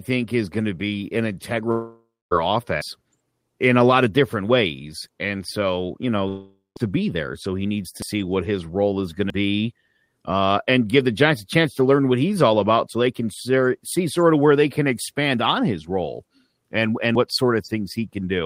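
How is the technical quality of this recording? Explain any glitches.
The speech in this recording is interrupted by two kinds of glitch: two longer gaps where the sound smears and goes quiet, and four brief skips.

The two gaps are a long network dropout, most likely from audio packets failing to arrive for about half a second each time. The first runs from 1.71 to 2.33 s, right after "going to be an", with about 600 ms lost. The second runs from 6.28 to 6.78 s, between "so you" and "to be there", with about 480 ms lost. In both cases the receiver stretches the last sound into a fading buzz. That leaves roughly 240 ms and 150 ms of near-silence before speech resumes past the missing section.

The four skips are a dropped buffer (overrun). This likely happens when the software fails to collect a block of samples before the hardware overwrites it. The audio on either side is then spliced together with no pause. 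The skips fall at 2.82, 8.02, 9.30 (just after "his role is going") and 17.15 s. The first loses around 150 ms and the others about a tenth of a second. Each one is heard as a sudden jump forward.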